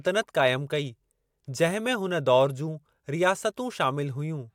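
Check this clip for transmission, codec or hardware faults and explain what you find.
No faults detected.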